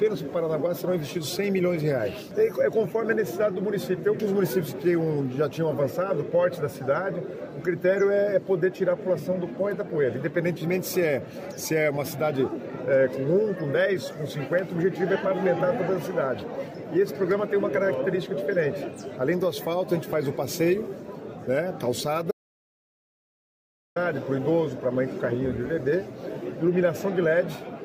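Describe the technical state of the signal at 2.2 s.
At 2.2 s the signal is intact, with no dropout, distortion, click or other technical fault to be heard.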